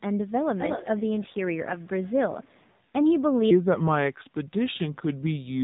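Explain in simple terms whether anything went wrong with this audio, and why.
Three things went wrong with this speech.

Throughout, the voice sounds muffled and somewhat buzzy and artificial, like a mobile phone call with a weak signal. That is the AMR narrowband mobile codec, the speech compression used on older mobile networks. It discards everything above about 4 kHz, which removes the crispness, and it rebuilds the voice from a simplified model of the throat and mouth. At the low quality used here, that rebuilding is clearly audible.

From 0.18 to 1.48 s, a second copy of the voice trails the first by about a quarter of a second (230 ms), almost as loud as the original. It returns much more faintly from 1.78 to 2.12 s and from 2.29 to 2.77 s. This is an echo leak, likely from someone on the call using a loudspeaker. Their echo canceller failed to remove all of the sound their microphone picked up, and the leftover was sent back.

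From 3.51 s to the end, the voice suddenly becomes slower and deeper, about five semitones lower, as if it had been stretched out. This is a section at the wrong speed. It runs at roughly three quarters of its proper rate, likely because a player or editing step used the wrong clock for this part. Speed and pitch dropped together.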